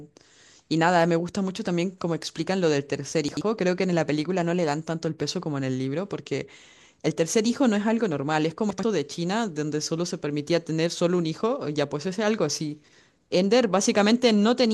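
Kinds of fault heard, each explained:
chunks out of order: Blocks of audio about 43 ms long arrived late and played after the blocks meant to follow them, two places late at 3.29 s and 8.70 s and one place late at 12.84 s, so the speech briefly jumbles.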